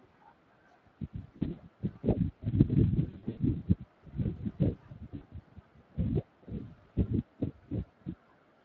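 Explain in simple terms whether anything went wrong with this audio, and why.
Yes, two things. The Speex codec squeezes this speech hard throughout, so it sounds rough and a bit hoarse, like old game chat. Then there's VoIP packet loss concealed by the speech codec at about 1.37 to 1.56 s, 3.09 to 3.40 s and 5.15 to 5.24 s: bits went missing and the decoder guessed, giving short buzzy or noisy, fading smears.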